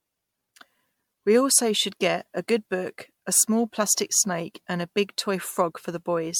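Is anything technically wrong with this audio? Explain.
Yes. Throughout the speech there is generation loss, likely from repeated MP3 encoding, which fits about four passes at 96 kbit/s. Each re-encode requantises on a shifted frame grid, so the result sounds swirly, hollow and smeared, with blurred consonant attacks. A spectrogram shows scattered holes and nothing above 19.9 kHz.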